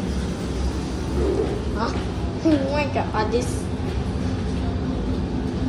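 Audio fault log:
No faults heard anywhere in this audio.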